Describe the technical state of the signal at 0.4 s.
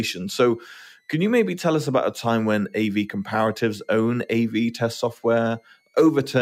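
At 0.4 s the speech carries a switching supply whistle, which runs through the whole clip rather than starting at this point. A switching power supply is cycling at an audible rate, in burst mode or beating against a second supply, and its ripple leaks into the audio path. It sounds like a faint high whistle, centred around 2 kHz and wandering between about 2.0 and 2.5 kHz, sitting roughly 45 dB below the speech.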